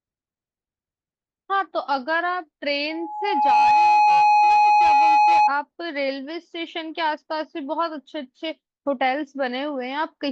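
From 2.9 to 5.52 s, loudspeaker feedback squeal: the microphone re-captures its own loudspeaker, and at 840 Hz the loop gain tops unity, so a pure tone swells within under a second to about 10 dB above the speech. A spectrogram shows one bright horizontal line; the waveform's envelope bulges.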